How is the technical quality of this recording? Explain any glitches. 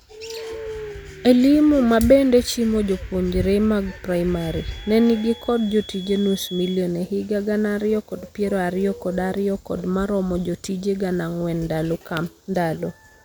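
The speech carries one glitch. From 4.26 to 6.85 s, after "mabende chimo jopuonre mag" and before "e higa gana ariyo", a thin, steady whistle near 3.4 kHz sits about 20 dB under the speech, swelling and fading slowly. This is a feedback whistle, likely from the loudspeaker-to-microphone loop hovering just at the point of feedback.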